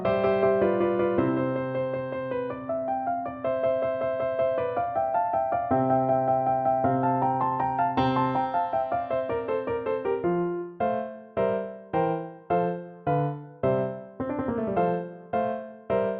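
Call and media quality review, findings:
No audible transport, capture or playback faults found across the clip; signal path presents no detectable dropouts, distortion, timing or level anomalies.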